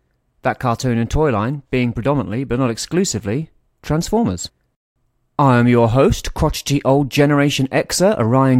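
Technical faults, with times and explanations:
No technical faults are evident anywhere in this speech recording.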